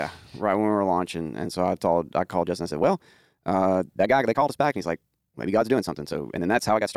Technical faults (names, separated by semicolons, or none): time-stretched section